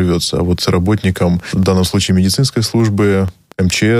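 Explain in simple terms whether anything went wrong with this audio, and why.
Yes: a train of clicks, about ten regular ticks four times a second, runs from 1.4 s to the end, likely interference or a faulty connection or power supply.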